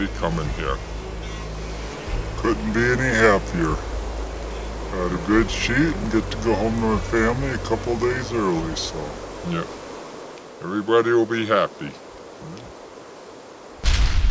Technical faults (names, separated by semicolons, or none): wrong sample rate